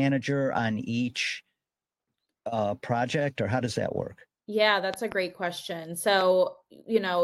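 At 4.94 s there's a loud pop, actually two sharp ones in quick succession running to about 5.14 s, jumping well above the speech. Then a single, softer pop lands at 6.21 to 6.23 s. The speech carries on underneath both times. This is most likely a sudden voltage step or pulse, from a plug, switch, static or driver glitch, getting into the signal path and being shaped into a thump by the circuits after it.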